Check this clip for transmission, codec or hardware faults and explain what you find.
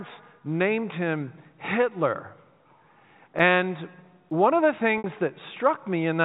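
Three faults stand out in the speech, all in the second half; the telephone-band G.711 A-law coding underneath sounds as expected, with nothing above 4 kHz.

At 3.39 s and again at 4.31 s there is a sharp tick. Each is a block of digital silence about 5 ms long: the sound cuts straight to silence and back with no fade, so the short gap is heard as a tick, most likely because the output buffer wasn't filled in time.

From 4.98 to 5.04 s the sound briefly takes on a held, slightly buzzy quality. This is packet loss with pitch repetition: about 60 ms of audio went missing, which fits two lost packets, and the receiver bridged the gap by repeating the last pitch period.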